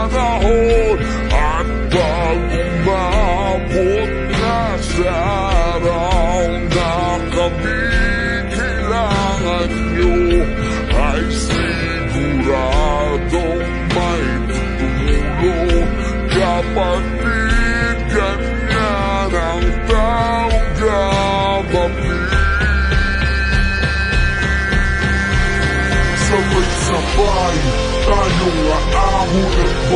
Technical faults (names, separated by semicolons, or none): wrong sample rate